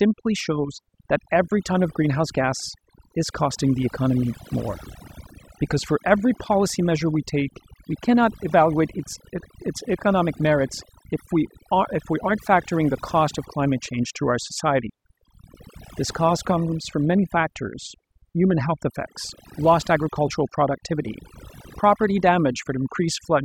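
Overdone noise removal runs through the whole speech clip. The noise reduction was pushed so hard that any frequency band sitting close to its noise estimate gets pulled almost to nothing, and the softer parts of the voice are cut along with the noise. Between phrases the background falls to near silence dotted with twinkling specks. Unlike a noise gate, which mutes everything at once, this removes individual bands separately, so the leftover specks flicker across many pitches.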